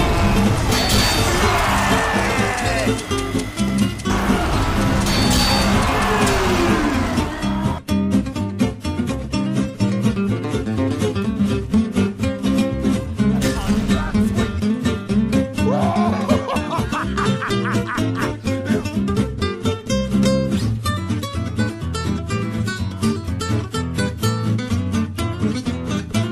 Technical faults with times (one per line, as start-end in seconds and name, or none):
none